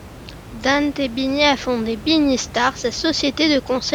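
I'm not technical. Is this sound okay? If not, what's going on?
Yes, the recording has no technical problems, and the faint background noise you may notice is just the natural sound of the room the microphone was in, sitting well below the speech.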